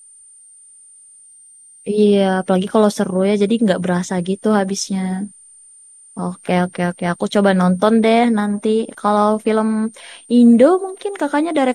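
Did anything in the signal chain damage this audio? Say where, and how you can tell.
Yes. A switching power supply feeding the analogue stage is running in an audible burst mode or beating with another supply, and this switching supply whistle leaks into the speech throughout. It is a thin high whistle wandering between about 8.8 and 9.0 kHz as the load shifts, roughly 30 dB below the speech.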